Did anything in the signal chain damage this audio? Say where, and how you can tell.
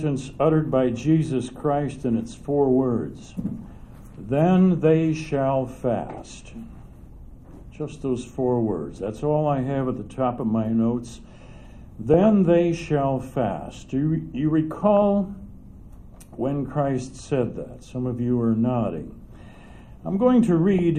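Yes. The damage happens at the codec stage, where weak DAB reception feeds corrupted data into the MP2 decoder. This is DAB burbling, heard as short bursts of noise blips in individual sub-bands at 8.95 to 9.08 s, 12.14 to 12.26 s, 14.97 to 15.02 s and 20.63 to 20.79 s. Bit errors at a low rate, a fraction of a percent, get past error correction and corrupt scale factors and samples, so individual sub-bands jump in level for a frame at a time. Each burst lasts about the length of a handful of frames. Network packet loss would sound different, giving gaps or repeated chunks, and clipping or clicks would be broadband. Here the disturbance is frequency-specific while the programme keeps running underneath.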